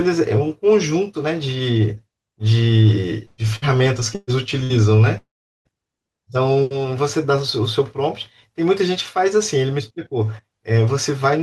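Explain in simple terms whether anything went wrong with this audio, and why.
Burst of packet loss, at 3.25–3.41 s, 3.56–3.69 s, 4.15–4.30 s and 4.63–4.73 s: each time, a short run of the speech, 60 to 120 ms, never arrived. The receiver stretched out the last sound, fading it, then jumped ahead, so small pieces go missing.

Long network dropout, from 5.18 to 5.68 s: about half a second of speech is lost. The last sound is briefly stretched as a fading buzz or hiss, then silence fills most of the gap before the speech resumes further on. A network outage is the likely cause.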